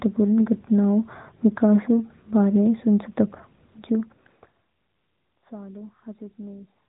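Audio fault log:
Throughout: AMR narrowband mobile codec. Nothing above 3.8 kHz passes, so the speech sounds thin and boxed in. The codec rebuilds the voice from a vocal-tract model and a few pulses per frame. The damage is plainly audible, a buzzy, synthetic edge that fits a mid-range rate near 10.2 kbps.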